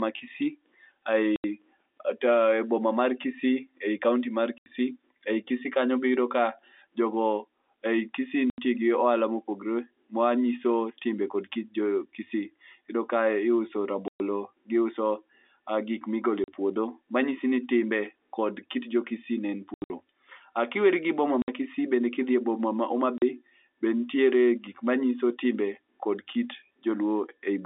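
Speech over a telephone-band line has packet loss filled with silence: hard-edged dropouts of 40 to 140 ms at 1.36, 4.58, 8.5, 14.08, 16.44, 19.74, 21.42 and 23.18 s, fitting 20 ms packets, seen as blank spectrogram columns and flat waveform gaps.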